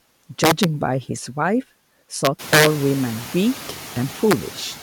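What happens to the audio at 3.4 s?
At 3.4 s, noise suppressor artifacts, present throughout: the suppressor cuts steady noise by about 9 dB band by band, frame by frame, so room noise, louder since about 2.5 s, sinks between phrases and rises under speech. Unlike a gate, it never drops to silence.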